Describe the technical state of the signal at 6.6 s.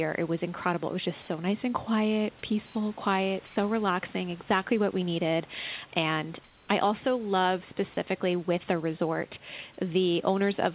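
At 6.6 s the signal sits inside a stretch of comfort noise in place of the background, running from 6.44 to 6.68 s. The likely cause is discontinuous transmission: the sender stopped sending audio during the pause, and the receiver filled it with synthetic noise shaped roughly like the room. For those 0.24 s the real background, about 32 dB below the loud speech, gives way to a flat, featureless hiss about 2 dB quieter, still band-limited below 4 kHz like the rest of the call.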